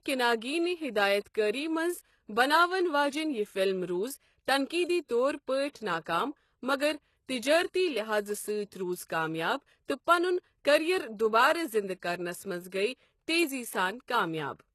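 Speech runs through what is likely HE-AAC compression for its whole length, with damage that is plainly audible. Only the lower band is coded properly; the upper band is rebuilt by spectral band replication, copied up from lower frequencies and shaped by a rough envelope. Nothing reaches above 12.3 kHz, and the thin, synthetic top fits a low bitrate around 16 kbps. The rebuilt treble keeps some brightness, but its harmonics don't align with the lower band, so s sounds come out gritty and metallic or lisped. There is also a pre-echo from 1.20 to 1.26 s, just after "کنیگی نہِ". The codec spread its quantisation noise across a whole transform block, and because a sharp onset arrived late in that block, noise sized for the loud part filled the quiet stretch ahead of it. The result is about 53 ms of short hiss leading into the attack, which then sounds smeared rather than crisp.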